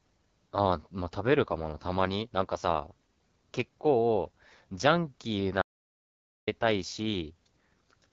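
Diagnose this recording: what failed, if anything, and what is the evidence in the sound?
The codec stage has failed: the whole recording carries AMR wideband (HD Voice) codec damage. The speech sounds plainly rough and raspy, with a noise-like top band above 6.4 kHz. That fits one of AMR-WB's lowest modes, around 8.85 kbit/s, where the pulse model runs short of bits.

At 5.62 s the speech cuts out mid-flow into silence with no room tone. It resumes at 6.47 s, so about 0.85 s is lost. This audio dropout to silence is likely an input or link failure upstream, while the recorder kept writing silence.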